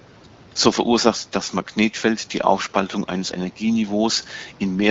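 No technical faults can be heard in this speech recording, which carries faint room noise about 30 dB below the speech and shows the light coding traces of an AMR wideband (HD Voice) codec, consistent with a rate of around 12.65 kbit/s.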